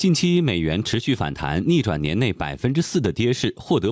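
From start to finish the speech shows gain pumping: the gain swings by around 10 dB, flattening the dynamics. The likely cause is excessive input gain being clamped by a fast limiter. Call-style microphone processing caps the band at 8 kHz.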